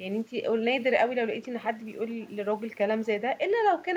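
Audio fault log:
2.21–2.3 s, echo leak: a faint, delayed copy of the speech slips back in for a brief scrap, trailing the original by 460 ms and sitting very low, around 35 dB under the talker. That's most likely a loudspeaker on the far end whose echo canceller let a bit of what its mic picked up get through and sent it back to us.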